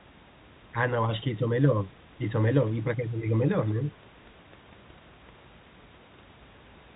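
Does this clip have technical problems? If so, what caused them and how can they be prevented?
No, there are no technical problems in this clip.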